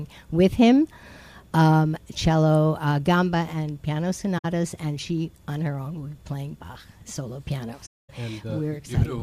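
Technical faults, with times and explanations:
4.38–4.45 s: AAC frame loss with muting. About 64 ms of sound drops out, fitting roughly three lost frames. The decoder zeroed their spectrum, and the overlapping windows soften the edges.
7.86–8.10 s: AAC frame loss with muting. A longer silent hole of about 235 ms, consistent with around eleven zeroed frames. The sound fades out and back in rather than cutting abruptly.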